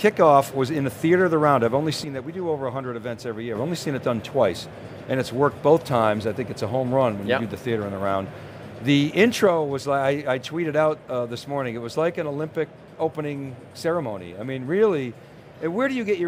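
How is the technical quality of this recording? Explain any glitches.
Two glitches stand out, both of the same kind: one channel drops out, likely because one stereo channel was lost. When a channel goes missing, the mono sum keeps only half of what both sides shared, so the sound falls abruptly by about 6 dB. Anything that existed only in the lost channel disappears. This happens from 2.04 to 3.55 s, and again from 9.47 s to the end.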